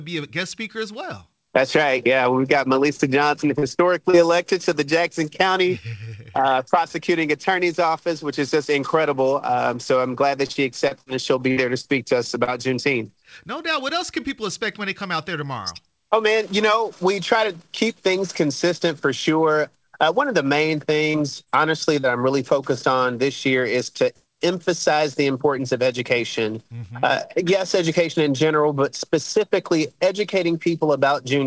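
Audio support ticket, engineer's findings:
Short concealed packet loss at 2.96, 3.59, 4.10, 21.11, 21.44 and 22.00 s. Brief smears and wobbles, each about 30 ms of audio missing at the decoder. Jitter buffer or network; concealment extended the preceding sound, then crossfaded back to real audio.

Repeated packet loss (robotic sound) from 10.46 to 12.50 s. Choppy stretch with seven holes, the longest about 56 ms, roughly an eighth of the span patched. Network loss bursts; concealment repeated back to back, removing sound fragments. The call path itself is G.722-like, band-limited to 8 kHz.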